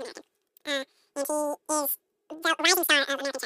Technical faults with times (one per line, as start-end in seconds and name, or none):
0.00-3.45 wrong sample rate